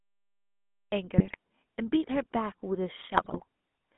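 From 0.00 to 0.92 s there is only digital silence. At 0.92 s the audio starts abruptly in the middle of a sound, with no attack or fade. This cut-off start means capture or streaming began late and missed the onset of whatever was already under way.

The entire clip carries the signature of the GSM full-rate codec. The passband is confined to roughly 200 Hz to 3.5 kHz, consistent with 13 kbps full-rate coding. The codec models the vocal tract with a filter and excites it with a sparse, regularly spaced pulse train that keeps only a third of the excitation samples. That crude excitation gives the speech a plainly audible buzzy, gravelly texture, and nothing above the band edge survives.

From 1.18 to 1.36 s and again from 3.12 to 3.44 s, the speech breaks up into squawks, pops and gargling. These are GSM bit errors: corrupted bits reached the decoder and scrambled the filter, pitch or gain parameters, so the spectrum bends and the level jumps frame by frame. 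The first burst spans about 0.18 s, which fits roughly nine 20 ms frames. The second lasts about 0.31 s, which fits around fifteen frames, and it is the denser of the two.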